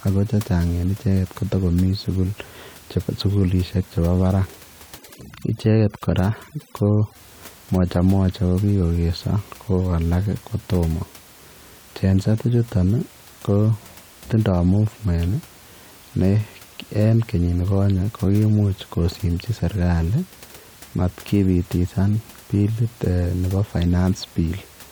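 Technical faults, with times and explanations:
4.98 to 7.15 s, overdone noise removal: for about two seconds the room noise, which otherwise sits about 26 dB under the speech, drops and breaks up into little twinkling specks. The denoiser is pushed too hard here, so it clamps individual frequency bands whenever they come close to its noise estimate, and the softer parts of the speech get pulled down along with the background noise.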